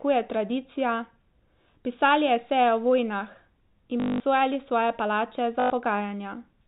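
At 4.0 to 4.2 s and 5.6 to 5.7 s there's packet loss with last packet repeated: the same chunk loops, giving a robotic buzz near 50 Hz, which fits 20 ms packets.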